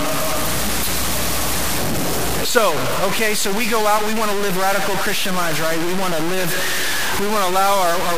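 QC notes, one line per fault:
throughout, low bit depth without dither: a harsh, grainy distortion rides on the speech and shifts with it, almost as loud as the speech itself, and quiet tails sputter or drop out. It is likely truncation to about 4 bits without dither.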